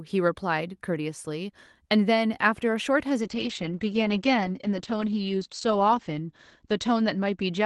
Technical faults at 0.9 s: none

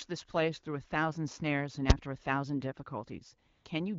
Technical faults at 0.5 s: none

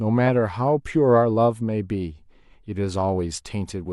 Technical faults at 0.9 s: none

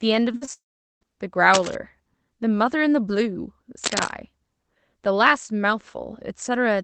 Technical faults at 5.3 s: none

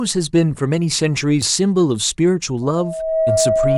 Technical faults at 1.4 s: CD skip

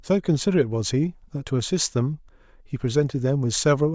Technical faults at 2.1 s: none

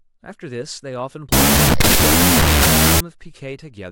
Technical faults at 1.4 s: wrong sample width

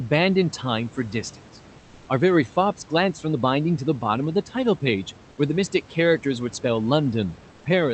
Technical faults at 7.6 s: comfort noise in place of the background

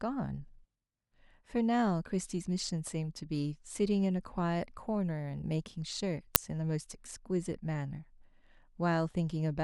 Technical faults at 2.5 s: none

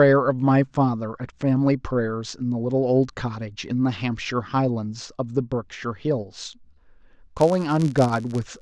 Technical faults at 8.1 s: filter restarted on every block

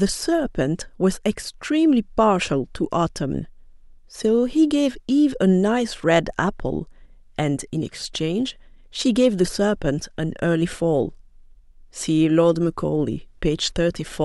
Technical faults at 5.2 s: none

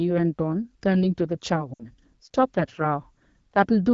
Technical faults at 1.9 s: lost AMR speech frames

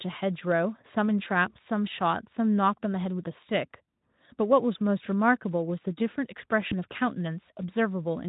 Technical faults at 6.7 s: VoIP packet loss concealed by the speech codec

